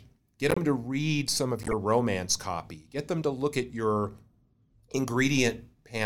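Compressed frames with flipped bits were decoded and played anyway, so misread codes and gains put energy at the wrong frequencies. This corrupt frame decoded fault breaks into the speech from 0.50 to 0.58 s and again, across more frames, from 1.60 to 1.73 s.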